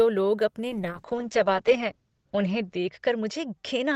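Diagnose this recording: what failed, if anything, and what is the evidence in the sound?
Call bitrate drop from 0.7 s, right after "लोग अपने", lasting to the end of the speech. This is a codec-stage fault driven by the call's bandwidth estimate. The audio bandwidth shrinks from 20 kHz to 8 kHz, so everything above 8 kHz vanishes and the sound turns muffled and coarse. The encoder spends about 1.07 s at its lowest rate. The degradation points to the bitrate falling from around 32 kbps to 8 kbps, forcing much cruder coding.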